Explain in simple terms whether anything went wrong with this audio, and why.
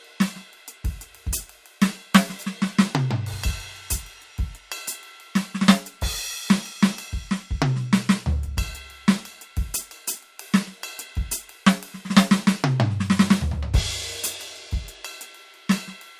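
Nothing went wrong with this piece of music. Listening through it, nothing sounds broken or out of place, so there is no problem to explain.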